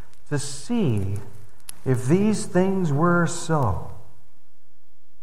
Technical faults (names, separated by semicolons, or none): none